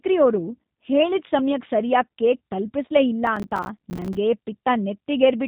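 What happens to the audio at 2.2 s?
At 2.2 s the speech carries the same G.729 codec damage that runs through the whole clip. It sounds plainly rough and synthetic, and nothing comes through above about 3.8 kHz. The sound is rebuilt from a vocal tract filter, a pitch predictor and a few pulses per short frame, which fits an 8 kbit/s codec. A simple low-pass filter would dull the sound cleanly, while this adds a buzzy, artificial grain.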